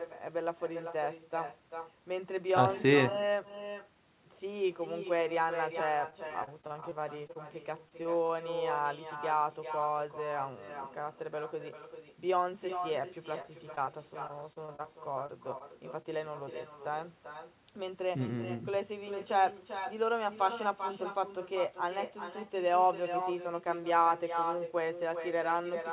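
Throughout the speech runs an echo with no canceller: every phrase returns roughly 400 ms later, about 8 dB quieter and thinner. It is a distinct delayed copy, not smeared reverberation, which points to the far end's loudspeaker feeding its microphone with nothing removing the return. The copy sits inside the same band as the direct sound, which is cut off above 4 kHz in the way of a narrowband G.711-style call.

From 6.1 to 8.31 s and again from 13.42 to 16.06 s there is repeated packet loss, giving a robotic sound. Each stretch has a dozen or so brief holes, none longer than about 30 ms, each patched by stretching the last sound before the next arrives. The choppy, robotic sound and clipped fragments are confined to these windows. Unlike the echo, which adds material throughout, this fault removes and smears pieces of the speech.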